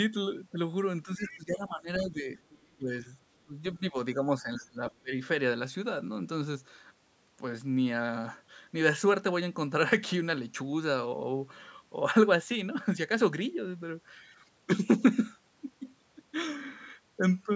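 Speech suppressed in double talk first appears from 1.05 to 2.41 s. The talker's level sags by about 15 dB across roughly a second of that span. This is likely the echo canceller reacting to both sides talking at once: unable to separate the near talker from the loudspeaker echo, it turned everything down. The same dips return at 2.77 to 3.09 s (about 15 dB), 3.45 to 3.96 s (about 20 dB) and 4.15 to 5.16 s. That last stretch is the deepest, about 25 dB, and covers most of the second, so the voice sags further there, within a band that already stops at 8 kHz.

The other side's voice leaking through shows up at 1.26 to 1.37 s, inside the first dip, and again at 2.5 to 2.67 s. These are brief, faint scraps of a second voice, about 20 dB and then about 30 dB below the talker. They likely come from loudspeaker sound that the canceller failed to remove completely from the microphone.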